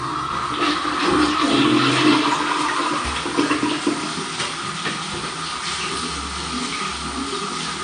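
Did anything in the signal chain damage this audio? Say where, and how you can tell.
Yes. The damage sits at the codec stage and runs throughout. Nothing is present above 9.6 kHz, and the remaining sound is dull and smeared with a warbling, fizzy texture. This is likely AAC compression at a low bitrate, consistent with about 32 kbps, where coarse quantisation removes the top band and thins the spectrum.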